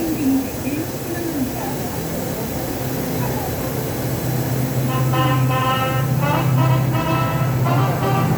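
At 1.49 s and again at 2.69 s the sound jumps forward abruptly, with no gap of silence at the join. Each jump skips only a few milliseconds of material. The likely cause is a dropped buffer (overrun): the capture side did not read a block of samples before the hardware overwrote it, so that block was lost and the audio on either side was spliced directly together.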